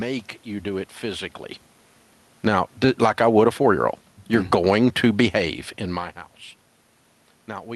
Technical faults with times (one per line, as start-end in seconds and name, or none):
2.32-3.30 automatic gain falling